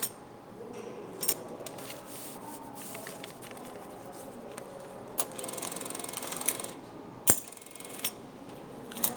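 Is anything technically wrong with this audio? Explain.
No, nothing is technically wrong with this audio.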